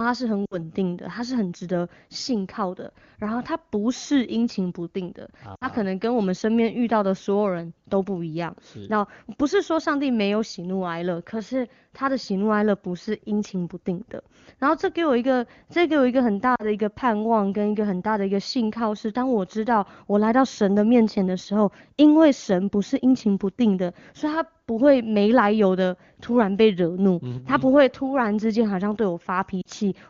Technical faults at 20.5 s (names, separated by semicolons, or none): none